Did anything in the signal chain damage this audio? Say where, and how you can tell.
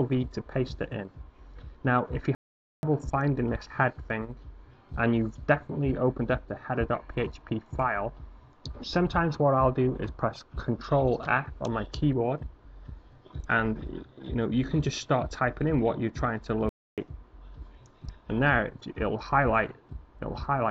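Yes, at the playback stage. There are two playback stalls: silence from 2.35 to 2.83 s, about 480 ms, and from 16.69 to 16.98 s, about 290 ms. Each time the sound halts mid-flow and then resumes. The likely cause is the player running out of buffered data.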